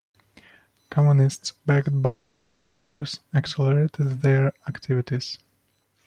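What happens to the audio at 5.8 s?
At 5.8 s the speech carries on intact, with no dropout, glitch or distortion at that moment.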